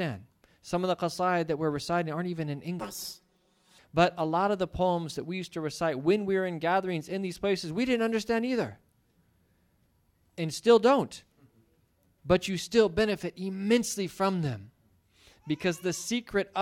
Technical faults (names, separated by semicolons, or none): planar audio read as interleaved